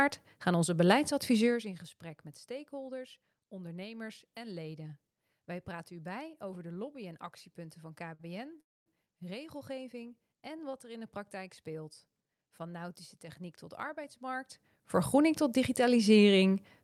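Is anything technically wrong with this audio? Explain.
Yes. There are two playback interruptions close together, just past the eight-second mark.

The first is a short stall from a late packet at 8.14 to 8.21 s. A packet missed its playout deadline and the jitter buffer ran dry, so the receiver extended the last stretch of audio by about 51 ms until the data arrived, then resumed from the same point. Nothing is lost, but the audio is briefly held too long.

The second is a call audio freeze from 8.61 to 8.88 s, lasting about 255 ms. Most of that, about 240 ms, is silence, with roughly 14 ms of concealment audio. When playback resumes it picks up where it stopped, so the freeze inserts a gap rather than removing material. The likely cause is packets held up in transit, which emptied the jitter buffer again and forced the receiver to pad until delivery resumed.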